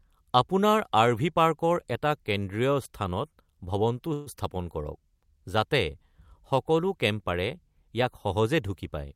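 At 4.13 s the speech stalls for about 0.15 s in a call audio freeze. The last sound is stretched into a brief fading buzz or hiss, filling roughly 131 ms. The likely cause is packets delayed in transit, emptying the jitter buffer. Unlike a dropout, nothing is lost. At 4.28 s the speech resumes exactly where it stopped, just 131 ms later. There is no cut into silence, only an inserted pause that shifts everything after it.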